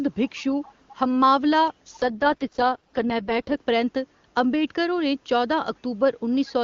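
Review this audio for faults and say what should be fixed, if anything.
A faint, delayed copy of the speech surfaces from 0.63 to 0.72 s, trailing by about 0.44 s. This is likely an echo leak from a far-end speakerphone whose echo canceller let its own loudspeaker through. Tuning that canceller, or using a headset there, would prevent it.

From 1.99 to 3.58 s the speech turns rough and synthetic, with no gap and no narrowing of band. This is an AMR rate drop: a weak radio link pushed the HD Voice codec from 23.85 down to 6.6 kbit/s. Stronger radio coverage would prevent it.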